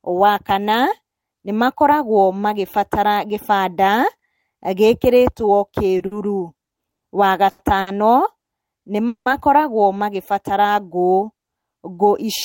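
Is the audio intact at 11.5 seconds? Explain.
Yes, at 11.5 seconds the speech is intact, with no fault to be heard at that moment.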